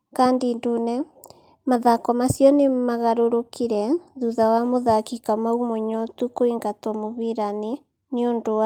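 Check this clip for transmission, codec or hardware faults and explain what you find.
Nothing in the speech here points to a transmission, codec or hardware fault.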